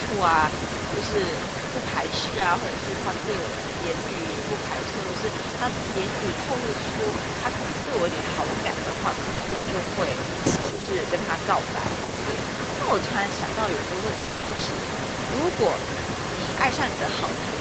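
Right from the start and through the whole clip there's an echo leak: a second copy of the speech trails about 176 ms behind, only a little quieter than the original, likely from a far-end loudspeaker that the echo canceller didn't fully clean up. At 2.30–2.46 s and again at 9.34–9.66 s you get repeated packet loss with that robotic sound. Roughly half of each stretch is patched by stretching the last bit of audio, so it turns choppy. Around 10.72–10.81 s the speech dips by something like 5 dB, speech suppressed in double talk, likely because the canceller ducked this side while both ends were talking. Then 14.17–14.65 s brings the worst burst of packet loss, with gaps up to 60 ms filled in, so it sounds chopped and robotic.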